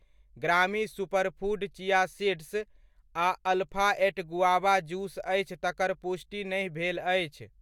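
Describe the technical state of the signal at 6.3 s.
At 6.3 s the speech signal is intact, with no audible technical fault at that moment.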